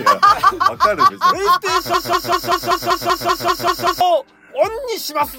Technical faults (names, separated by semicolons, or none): broken-record loop